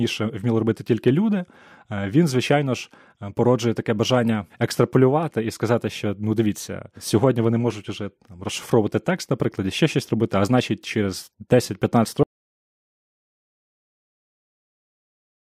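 Speech runs until 12.23 s, when it cuts off abruptly and the remaining 3.4 s to the end is silence with no room tone at all. This audio dropout to silence was likely caused by the input being lost while recording continued writing silence.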